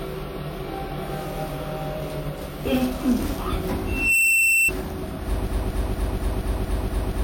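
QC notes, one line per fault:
3.87–4.72 s, loudspeaker feedback squeal: a 2.7 kHz tone swells over about a third of a second to roughly 10 dB above the sound, as the mic-speaker loop gain exceeds one.
5.47 s to end, broken-record loop: a 235 ms fragment repeats back to back eight times, replacing the missing audio; likely a stalled player or stream resending its last buffer.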